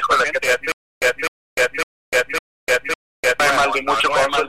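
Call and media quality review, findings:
Doubled audio track, whole clip. A second full-band copy sits roughly 0.7 s behind the original, about 5 dB quieter. There is no decay or room colour on it, so it reads as a clean repeat, not an echo. Likely cause is a second capture through a slower path, or an edit holding two copies out of step. Check for a duplicate route into the mix.

Stutter with silent gaps, 0.72 to 3.40 s. A 255 ms fragment replays 5 times on a steady 554.5 ms cycle. Each replay is followed by 300 ms of digital silence. The audio due in that span never plays and is lost. Likely cause is a stalled player or stream that re-served its last fragment at each retry, then ran empty. Check buffer underrun handling.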